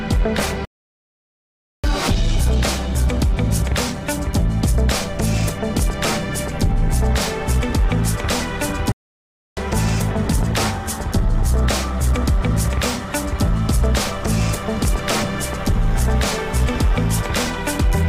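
At 0.65 s the sound just stops dead and stays silent for about 1.19 s before picking up again at 1.84 s, and it happens a second time at 8.92 s, a gap of about 0.65 s ending at 9.57 s. Both are playback stalls: the player was likely starved of data or had its thread held up, so the output went quiet mid-flow until it caught up.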